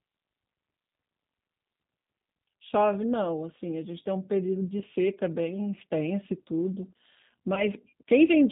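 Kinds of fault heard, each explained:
G.729 codec, throughout: the speech is rebuilt from a vocal tract filter, a pitch estimate and a few pulses per 10 ms frame, and the clear, plainly audible damage fits an 8 kbit/s stream of this kind. Nothing above 4 kHz survives, so the sound is dull and band-limited, and the coarse pulse coding leaves a slightly rough, synthetic texture throughout.
VoIP packet loss concealed by the speech codec, at 4.79 to 4.84 s and 7.55 to 7.64 s: each gap sounds like about 20 ms of missing audio, which fits a single lost packet each time. The decoder fills the hole by repeating its last pitch and filter with falling gain, so the sound turns briefly into a buzzy tone or coloured noise and fades. Because each frame is predicted from the previous one, the speech stays weak or smeared for a short while after audio resumes.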